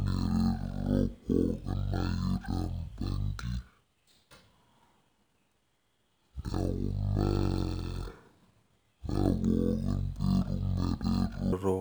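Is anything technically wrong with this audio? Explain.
Yes. From 0.0 to 11.53 s the speech plays as stereo read as mono: interleaved left and right samples are taken as one sequential channel, so the playback runs at 0.5 times speed and sits 12 semitones, a full octave, too low.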